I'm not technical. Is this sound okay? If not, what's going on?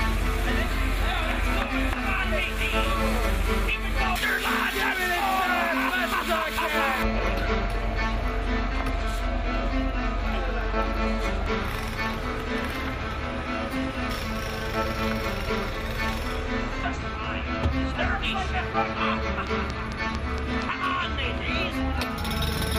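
No. A train of clicks runs from 19.47 to 20.63 s: about seven sharp ticks, evenly spaced at roughly four per second, standing out well above the sound. The likely cause is electrical interference or a faulty connection or power supply repeatedly injecting the same brief pulse.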